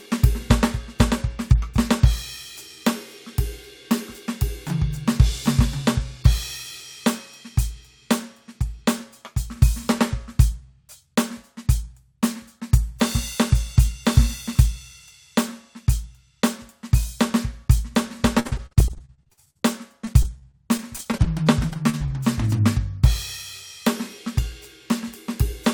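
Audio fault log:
18.39–19.63 s, repeated packet loss (robotic sound): The music breaks up into many short gaps, the longest about 60 ms. Each hole is bridged by stretching the sound just before it, and those patches fill over a third of the span. The result is choppy.
20.05–22.11 s, repeated packet loss (robotic sound): The same break-up returns more sparsely. Gaps reach about 38 ms, and the patched sound covers about 15% of the span.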